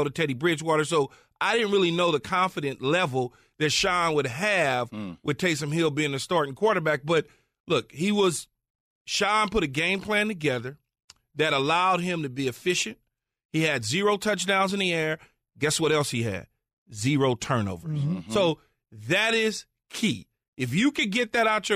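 No technical faults can be heard anywhere in the recording; the speech signal stays continuous and stable throughout.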